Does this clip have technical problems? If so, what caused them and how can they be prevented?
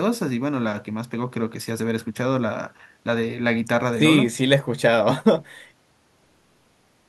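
No, no technical faults detected.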